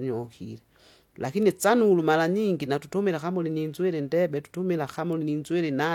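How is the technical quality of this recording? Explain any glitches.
Two isolated ticks mar the speech, at 1.43 s and 5.13 s. Both are bit error spikes: a single flipped bit throws one sample up or down by a power of two, then it snaps back. Unlike a dropout or edit click, nothing is lost or shifted. The sound carries on unchanged, leaving only a sharp, full-band tick unrelated to the speech.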